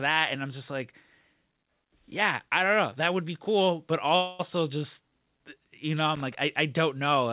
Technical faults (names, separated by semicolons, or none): call audio freeze; loose connector crackle